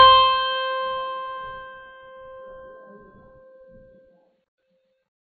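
Throughout, the music sounds dull and warbly, likely from heavy AAC compression at a very low bitrate near 16 kbps; a spectrogram shows nothing above 6.1 kHz.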